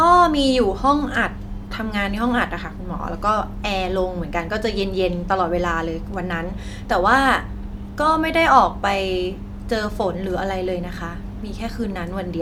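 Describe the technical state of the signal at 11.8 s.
At 11.8 s the speech signal is intact, with no audible technical fault at that moment.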